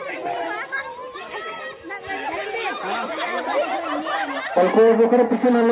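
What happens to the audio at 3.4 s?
Nothing goes wrong at 3.4 s; the audio plays through that moment intact, with no dropout, click or other fault.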